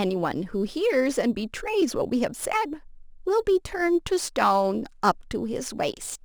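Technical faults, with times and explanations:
Throughout, crude rate conversion: each output sample was copied from the nearest original sample with no filtering, which fits a 48 kHz to 44.1 kHz change. The timing error repeats in a fixed cycle, adding a gritty, inharmonic fizz roughly 25 dB below the speech that tracks its louder, brighter moments.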